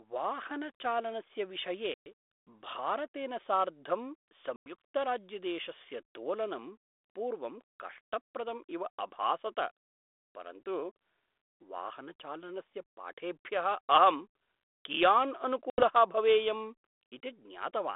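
At 1.94 to 2.07 s, 4.56 to 4.73 s and 15.7 to 15.83 s, packet loss on an ADPCM call cuts hard-edged silent gaps of about 120, 100 and 80 ms into the 32 kbit/s G.726 speech. Each gap is followed by slightly distorted speech while the decoder's predictor and step size resynchronise.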